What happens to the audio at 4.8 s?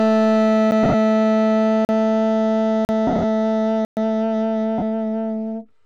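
From 4.78 to 4.83 s, lost LE Audio frames (about 38 ms, fitting five 7.5 ms LC3 frames) are concealed by repeating the last spectrum with random signs, smearing the sound into noise.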